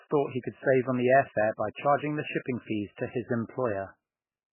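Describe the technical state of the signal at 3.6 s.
At 3.6 s the speech carries the same heavy damage as the rest of the clip, which sounds like MP3 compression. There's nothing above 3 kHz, so the top end is simply gone, and the sound has that watery, swirly quality you get when weak frequency lines keep flicking on and off between frames. S sounds go chirpy and attacks smear. It likely comes from a starved encoder, and the damage fits a very low bitrate, around 8 kbps.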